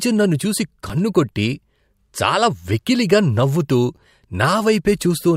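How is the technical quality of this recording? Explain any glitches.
The speech is marred by two brief dropouts, at 0.89 s and 3.97 s, each an underrun with held sample. Both times the output buffer ran dry for about 5.3 ms, which fits a 256-sample buffer, and the converter froze on its last value until data arrived. The sound cuts out abruptly, and roughly 5 ms of live audio was lost before it resumes. On a waveform, each appears as a short flat line held off zero, then a sudden step; a spectrogram shows a thin blank slice.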